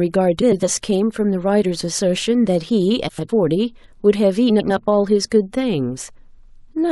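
Frames out of order occur at 0.42 to 0.63 s, 3.08 to 3.30 s and 4.49 to 4.71 s. Two neighbouring 104.5 ms blocks, which fits runs of four frames, play swapped. This produces a garbled flutter.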